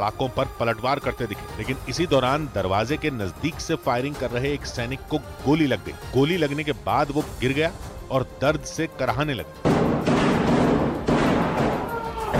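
There are no technical faults to describe at any point in this clip.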